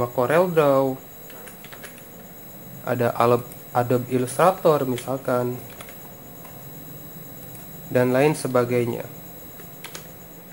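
Crude rate conversion runs through the whole clip, from start to finish. The sample rate was changed by simply picking the nearest existing sample, so samples are dropped at regular intervals, which fits a conversion from 48 kHz to 44.1 kHz. That repeating skip pattern produces shifted, inharmonic copies of the sound, sitting roughly 25 dB below it, heard as a gritty, inharmonic fizz that rises with louder and brighter passages.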